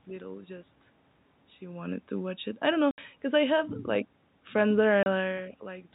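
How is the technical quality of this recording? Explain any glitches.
Two short dropouts cut into the speech. Both are packet loss filled with silence. At 2.91 s a 70 ms hole appears, and at 5.03 s a 30 ms one. Lost packets were replaced with silence, which fits 10 ms packets. Each gap has hard edges.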